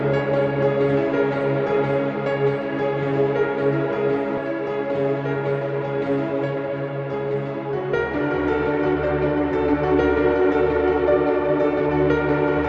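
Four short stretches of this everyday-sound recording run noticeably hurried at unchanged pitch: 5.52–6.34 s (about 5% fast), 6.99–7.80 s (9%), 8.94–9.96 s (16%, the most rushed), and 11.05–11.90 s (11%). This is jitter buffer speed-up. After audio piled up beyond its target delay, the receiver repeatedly cut out pitch-period-sized slices to catch up, dropping roughly 50 to 150 ms per stretch. The sound passes through a call codec whose top end stops near 12 kHz.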